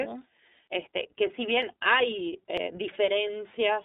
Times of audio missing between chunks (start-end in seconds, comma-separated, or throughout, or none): 1.62, 2.57